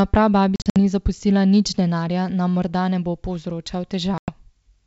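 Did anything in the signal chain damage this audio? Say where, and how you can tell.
Yes: network packet loss on an ADPCM call, with hard silent holes scattered over 0.56–0.78 s (about 140 ms lost, longest 60 ms) before "ni zapustila nič denarja", and 4.18–4.32 s (100 ms). Unlike a plain buffer dropout, the sound resumes slightly distorted while the decoder's predictor re-tracks over the G.722 wideband coding.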